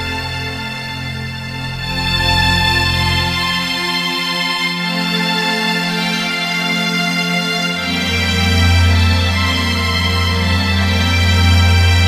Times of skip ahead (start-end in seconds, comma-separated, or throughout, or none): none